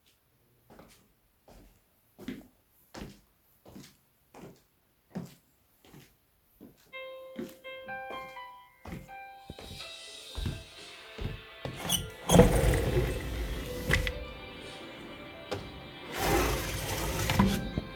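No technical faults are audible anywhere in the recording.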